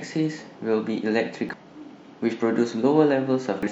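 Speech with two brief glitches, at 1.49 to 1.54 s and 3.63 to 3.68 s, caused by damaged data in a compressed stream that makes the decoder misread frames and lose sync.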